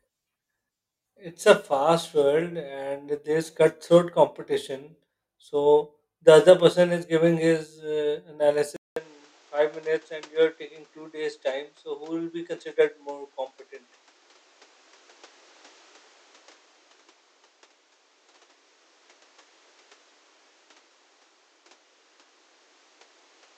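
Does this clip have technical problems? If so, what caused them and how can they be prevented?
Yes. At 8.76 s, after "is giving his uh", a 200 ms gap appears; from then on the spectrogram shows nothing above 8.4 kHz and a new, faint noise floor, at about the same level. This is likely an input switched to a poorer device. Locking the recording input so the system cannot switch microphones mid-session prevents it.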